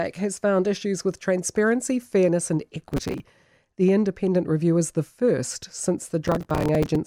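Speech, with two bursts of processor overload crackle. The first starts at 2.82 s, right after "with transparency fairness and", and runs to 3.2 s. The second hits at 6.25 s after "is the first since" and lasts until about 6.96 s. Both have that gritty tearing texture of the machine missing buffer deadlines over and over, each miss replaying a sliver of old audio with hard edges. The grain suggests buffers of around 5 ms.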